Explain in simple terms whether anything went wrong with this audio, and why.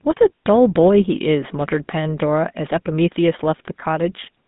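GSM full-rate codec damage runs through the whole clip: it rebuilds the voice from spaced pulses and drops everything above 3.8 kHz, leaving a buzzy, gravelly, muffled sound.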